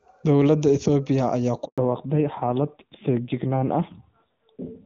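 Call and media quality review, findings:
Handover gap, 1.66 to 1.78 s, right after "ayaa ku": speech drops to silence for 120 ms while the call switches networks and no frames arrive; that speech is lost.

Fallback to narrowband from 1.78 s to the end: nothing above 4 kHz, so the voice turns duller and rougher than the clear HD Voice before the gap. The sound points to AMR-NB around 7.4 kbit/s.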